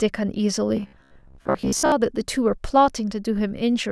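Speech with robotic sound from repeated short buffers between 0.77 s and 1.92 s: the voice becomes a rigid, metallic buzz at about 67 Hz. The likely cause is audio arriving too slowly, so a fragment of roughly 15 ms is looped in place of about half the real signal.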